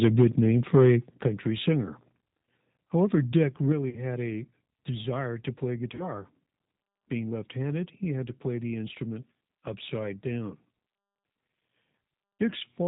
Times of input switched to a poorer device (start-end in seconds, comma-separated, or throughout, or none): none